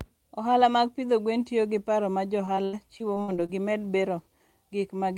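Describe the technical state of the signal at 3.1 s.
Repeated packet loss (robotic sound) covers 2.45 to 3.50 s, so 3.1 s falls inside it. Eight gaps, the longest 78 ms, are each patched by stretching the preceding sound, concealing about a quarter of the span and leaving the speech choppy and robotic.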